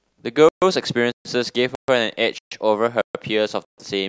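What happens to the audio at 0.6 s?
At 0.6 s the speech is sitting inside a hole of silence that runs from 0.49 to 0.62 s, about 132 ms, with nothing missing from the speech itself. This is a gap between chunks: the audio was carried in separate pieces, which points to chunks of about half a second, and silence was inserted at the join, pushing the next piece late instead of dropping any of it.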